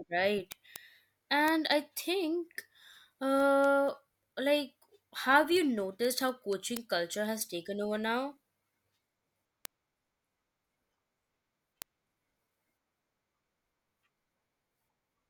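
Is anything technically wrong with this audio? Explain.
Yes. From 0.28 s to 15.18 s the speech carries word clock ticks, a steady train of sharp clicks about every fifth of a second, around seventy in all. The digital link is being read by a receiver running on its own clock rather than locked to the sender's, with the two clocks differing by roughly 100 ppm. Each time they slip past one another, one sample is dropped or repeated, producing a brief discontinuity heard as a tick.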